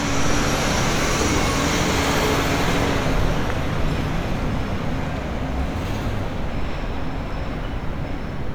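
Everyday sounds, with no technical faults heard.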